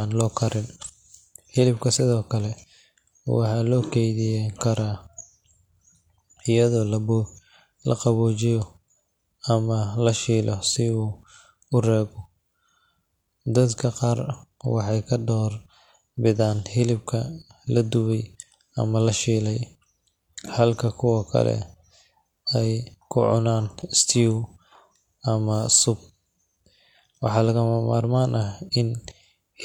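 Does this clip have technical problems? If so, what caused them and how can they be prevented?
No, this clip has no technical problems, so there is nothing to prevent.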